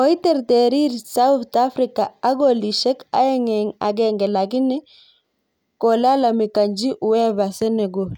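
No technical faults can be heard anywhere in the speech. There is nothing in the audio that calls for a time stamp or an explanation.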